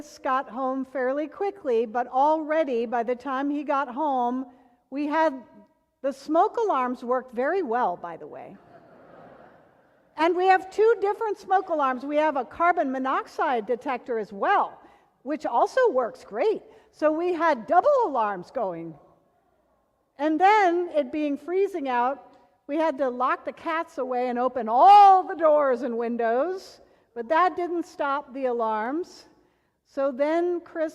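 Nothing in the audio stood out as a technical problem on listening.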